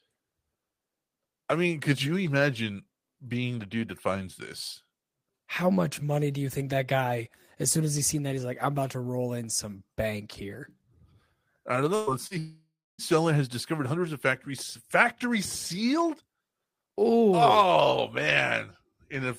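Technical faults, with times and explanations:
11.95–12.10 s, burst of packet loss: right after "I don't", about 120 ms of audio goes missing. The receiver keeps extending the last sound and fading it down across the gap instead of leaving silence, so a held buzz or hiss stands in before the audio jumps ahead.
12.27 s, short concealed packet loss: about 40 ms never reaches the decoder in time. The receiver covers it by continuing the preceding sound for roughly 37 ms and blending back in, heard as a brief smear or wobble where a short sound can drop out.
12.38–13.01 s, long network dropout: about 600 ms of audio is absent, likely because nothing arrived over the network. A fading continuation of the last sound gives way to roughly 280 ms of silence, and the audio resumes at "has discovered hundreds of" with the lost stretch skipped.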